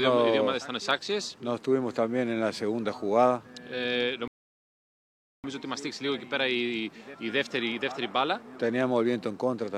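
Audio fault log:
4.28–5.44 s, rebuffering stall: the sound drops to silence for about 1.16 s, then resumes exactly where it stopped, because playback ran out of downloaded audio.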